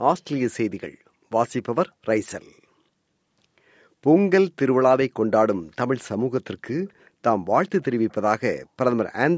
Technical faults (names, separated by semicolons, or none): echo leak